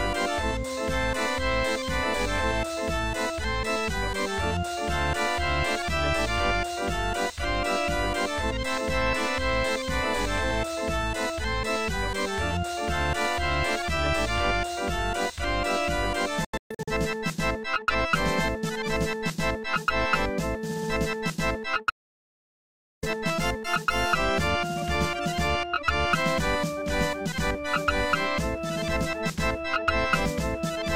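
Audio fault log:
16.45–16.92 s, digital broadcast dropout: about 0.3 s muted in several short holes across 0.43 s, longest 128 ms, with 3 ms fades; shows as narrow blank vertical strips.
21.90–23.03 s, audio dropout to silence: sound cuts abruptly to 1.12 s of silence with no room tone, likely a lost input; flat waveform, empty spectrogram column.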